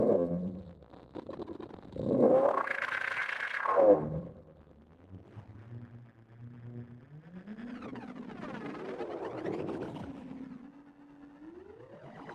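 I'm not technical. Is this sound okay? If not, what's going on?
No, not quite. The audio has a steady timing problem from start to finish.

The first fault is clock drift between sender and receiver. The device sending this sound kept time a little faster than the device receiving it, by roughly four percent. That means audio kept arriving slightly faster than it could be played. The difference is small, but it piles up every second, so the receiving side has to keep catching up.

The second fault is repeated timing corrections, which is how the receiver catches up. From 0.04 s to 12.28 s, it keeps trimming tiny pieces out of the sound so it doesn't fall behind. The trims all go the same way, and they come at uneven gaps. Each one is short. You might notice them as small hiccups, or as the sound's pace feeling slightly unsteady.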